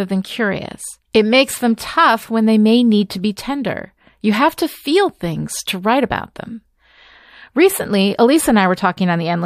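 No technical faults can be heard anywhere in this speech recording. There is no event in the audio to place on a timeline.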